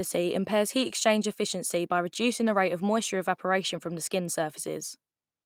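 A short speech recording, and nothing is technically wrong with it.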